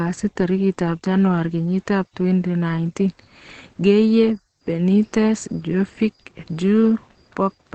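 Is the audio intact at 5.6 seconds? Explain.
No. At 5.6 seconds the speech carries the same Opus compression damage heard throughout the clip. Nothing reaches above 8.5 kHz, so the top of the spectrum is cut away and the speech sounds muffled. A hoarse quality runs through it. That combination points to the codec's speech-oriented mode at a wideband setting, likely at a low bitrate around 16 kbps, where the encoder narrows the bandwidth and models the voice coarsely instead of preserving its full detail.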